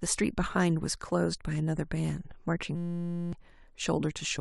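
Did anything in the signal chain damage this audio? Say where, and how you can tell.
Yes, at the driver and buffer stage. From 2.75 s to 3.33 s the speech drops out and is replaced by a steady buzz pitched at 172 Hz. That's a system hang loop: the machine stalled while the sound hardware kept replaying the same 5.8 ms slice of its ring buffer, about a hundred times over, which fits a 256-sample buffer. Because the slice is so short, you hear a tone rather than a stutter, and about half a second of real audio is lost.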